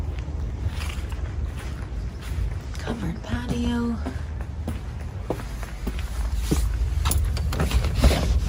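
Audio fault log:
No faults can be heard anywhere in this clip. There is nothing in the audio to log.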